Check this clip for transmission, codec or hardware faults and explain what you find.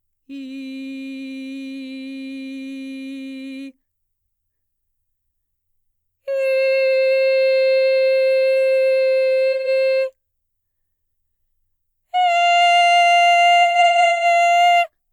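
The music has two stretches of AAC frame loss with concealment. From 9.52 to 9.68 s, the sound turns briefly smeared and phasey. From 13.62 to 14.25 s, the same blurred, noisy texture comes in scattered bursts, the longest run about 150 ms. The cause is lost AAC frames, roughly three in the first event and ten in the second. For each gap, the decoder rebuilt audio from the last good spectrum with randomised detail, which produces that washed-out patch.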